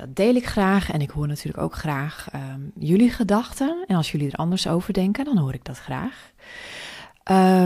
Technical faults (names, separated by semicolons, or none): none